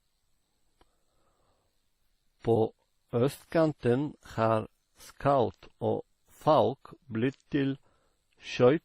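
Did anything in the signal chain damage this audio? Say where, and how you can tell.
Yes, at the codec stage, throughout the speech: transcoding between lossy codecs, likely WMA then Opus, both around 32 kbit/s. Two distinct artefact textures sit together, smeared swirl plus a second codec's own coarseness, under the lower inherited cut-off, unlike single-codec damage.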